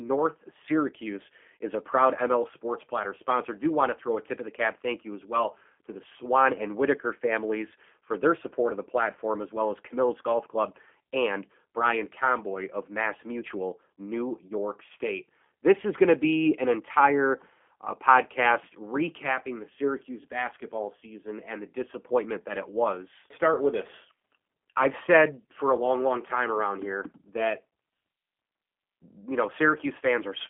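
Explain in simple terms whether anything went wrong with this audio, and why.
Yes, the speech passed through a G.729 codec from start to finish. It keeps nothing above 3.5 kHz, so it sounds narrow, rough and synthetic.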